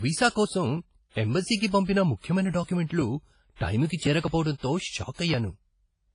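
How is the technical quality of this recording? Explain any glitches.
The recording is heavily degraded, with washy coding damage throughout and three smeared attacks.

WMA compression, likely, runs throughout: coarse transform quantisation at what sounds like a low bitrate near 24 kbps removes everything above 10.1 kHz and leaves ringing, breathing hiss.

Pre-echo at 2.64 s, 3.87 s and 4.58 s: quantisation noise spreads backward through each block, so a hiss of about 40, 35 and 54 ms precedes each attack and softens it.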